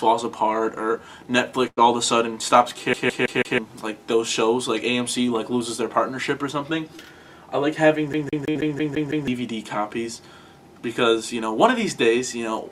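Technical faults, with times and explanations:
1.67–1.79 s and 8.50–8.70 s, burst of packet loss: roughly 100 ms and then 60 ms of audio failed to arrive in time. The receiver extended the last sound and faded it, about 96 ms and 52 ms of fill. The audio then resumes with that stretch missing; the second gap also carries about 20 ms of added delay.
2.93–3.58 s and 8.13–9.28 s, CD stuck on one turn: the laser jumps back by the same 162 ms on every turn, so one short fragment repeats 4 times and then 7 times. Each repeat is broken by a brief mute, giving the fast, even stutter of a skipping disc.
6.97–7.00 s, short concealed packet loss: about 20 ms never reached the decoder in time. The receiver filled roughly 13 ms by continuing the preceding sound and blended back into the real signal, leaving a brief smear or wobble where a tiny slice is gone.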